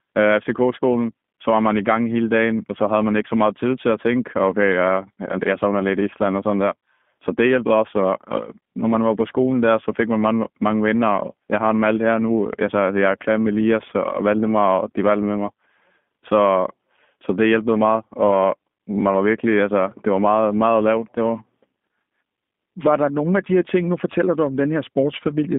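Speech carrying G.729 codec damage from start to finish: the band runs from 150 Hz to 3.6 kHz, and a plainly rough, synthetic grain, consistent with 8 kbit/s G.729A, sets it apart from simple telephone band-limiting, which narrows sound without that rebuilt texture.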